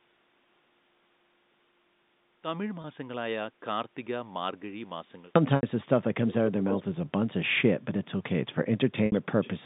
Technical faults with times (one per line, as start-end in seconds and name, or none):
0.00-5.36 audio dropout to silence
2.82-2.84 packet loss with pitch repetition
5.56-5.63 packet loss with pitch repetition
6.69-6.83 echo leak
9.06-9.12 packet loss with pitch repetition